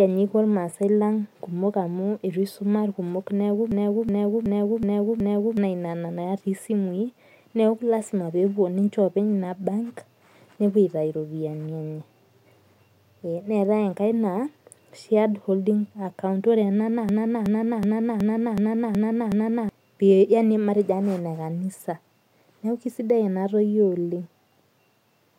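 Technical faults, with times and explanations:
3.72–5.57 s and 17.09–19.69 s, system hang loop: the playback froze and kept replaying one 0.37 s chunk, five and then seven times, a machine-gun stutter at about 2.7 Hz that fits a 16384-sample buffer, swallowing roughly two and three seconds of speech.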